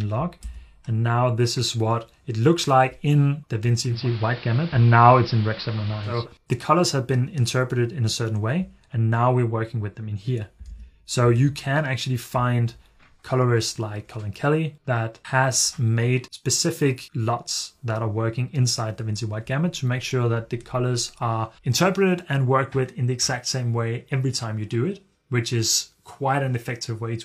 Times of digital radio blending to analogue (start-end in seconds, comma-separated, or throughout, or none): 3.86-6.28